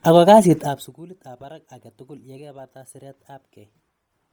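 From start to finish the speech carries a breathy, grainy edge. The upper frequencies sound hissy and smeared, as if hollowed out and filled with noise, though content reaches up to about 20.2 kHz before stopping. The damage is heavy, which points to a low rate near 32 kbps in 10 ms frames. The likely cause is Bluetooth LC3 compression discarding much of the upper spectrum and substituting noise.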